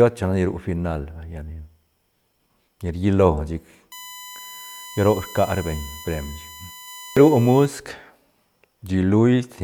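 USB whine runs through this speech clip from 3.92 to 7.66 s, a steady 1 kHz tone sitting roughly 20 dB below the signal. Current drawn in 1 ms USB frames is leaking into the audio through shared power or ground, producing that fixed pitch.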